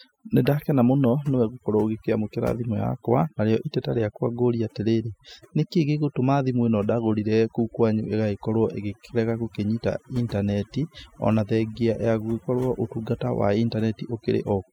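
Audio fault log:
Throughout: overdone noise removal. Noise reduction was applied far too strongly to a noisy speech recording, so any frequency band that sits close to the tool's noise estimate is pulled down hard or shut off completely. The quieter parts of the voice fall below that threshold and are removed along with the noise. The background drops and breaks up into twinkling specks where isolated bands flicker on and off.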